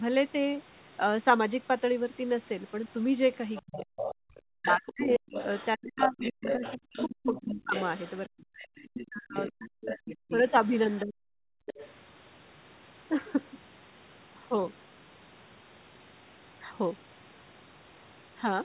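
From 3.55 to 4.15 s the other side's voice leaks through, sitting roughly 10 dB under the talker. This is likely residual loudspeaker echo the canceller failed to subtract. On a spectrogram it shows as a second, fainter set of harmonic striations overlapping the main speech.

Inside that stretch, from 3.64 to 4.03 s, the talker's speech is suppressed in double talk. The waveform caves in by around 40 dB for roughly 400 ms. The canceller likely confused both voices with echo and ducked them together.

The same pairing returns at greater length. Speech suppressed in double talk runs from 4.61 to 10.37 s, chopping out about 3 s in total as scattered gaps, while leakage continues from 4.86 to 11.01 s. On the waveform the envelope is visibly punched with holes, and on the spectrogram the upper harmonics thin out. A brief dip of the same kind follows at 11.03 to 11.22 s.

From 11.50 to 11.66 s the background is gated by the echo canceller. 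The room tone drops by about 36 dB for about 150 ms, a near-blank slot on the spectrogram, before it recovers.

At 11.66 to 11.88 s the other side leaks through once more, about 15 dB down, likely another echo residue.

All of this sits in a band that stops at 4 kHz, which fits the G.711 call path.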